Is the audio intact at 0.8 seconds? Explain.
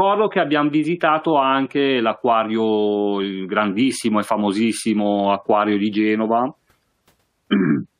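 Yes, at 0.8 seconds the audio is intact, with no dropout, click, distortion or other fault audible at that point.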